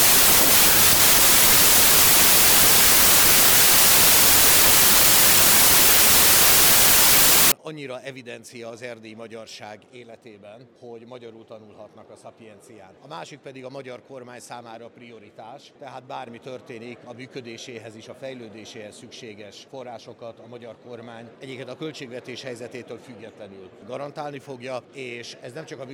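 From 0 to 7.52 s there is a wrong sample width. The pattern fits packed 24-bit samples being read as 32-bit ones, so each value mixes bytes from neighbouring samples. The sound becomes loud noise with the original buried beneath, playing 1.33 times too fast and high in pitch.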